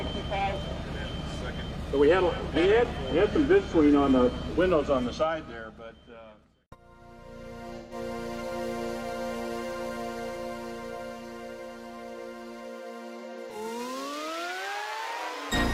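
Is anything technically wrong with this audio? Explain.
Yes, there is AAC frame loss with concealment at 7.77–7.93 s and 13.19–13.56 s. About 128 ms of decoded data went missing each time, consistent with three lost frames. The decoder patched those gaps from the last good spectrum, leaving brief smeared, noisy, phasey patches. The second patch is broken into shorter gaps, none much longer than about 40 ms, spread across roughly a third of a second.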